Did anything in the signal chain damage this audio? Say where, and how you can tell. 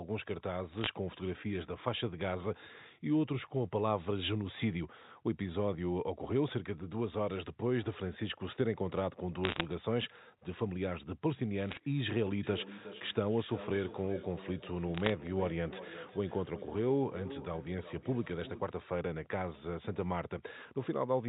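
Yes. Bit errors on the digital phone line give short crackly tick bursts at 0.72–0.89, 9.44–9.63, 11.69–11.80 and 14.94–15.10 s. Flipped bits corrupt single G.711 samples, at around half a percent.

Feedback echo between two devices, a call-processing failure, runs from 12.43 to 18.86 s. Repeats come every 400 ms, peaking about 13 dB under the speech, because one device replays the other's microphone.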